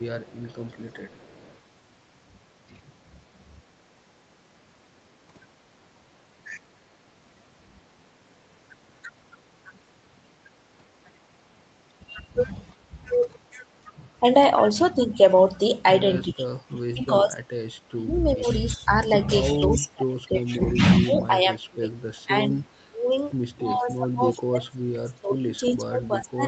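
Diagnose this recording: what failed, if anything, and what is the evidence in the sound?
Echo leak, in the call processing stage. From 0.0 to 1.59 s a faint delayed copy of the speech trails the talker by 365 ms. It sits very low, around 35 dB under the main speech. So it reads as a ghostly shadow rather than a clear repeat. The likely cause is a far-end echo canceller that did not fully remove what its microphone picked up from the loudspeaker. The residue was sent back down the call.

Speech suppressed in double talk, also in the call processing stage. The talker's level drops in pieces. There is a brief dip at 12.89 to 12.94 s. Longer ones follow at 16.3 to 18.89 s, 19.52 to 21.91 s, 22.25 to 23.09 s, and from 23.74 s to the end. The dips range from about 15 dB to about 30 dB deep. Both sides were likely talking at once. The echo canceller could not tell this talker from echo and pulled both down.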